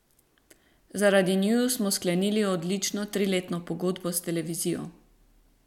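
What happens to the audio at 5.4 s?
Nothing goes wrong at 5.4 s; the speech there plays through intact, with no dropout, click or distortion to be heard.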